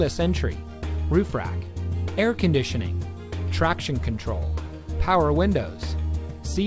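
No technical faults are audible.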